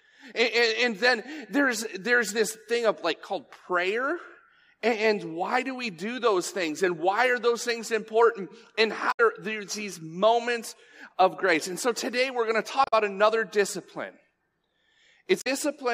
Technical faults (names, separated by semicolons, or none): damaged data in a compressed stream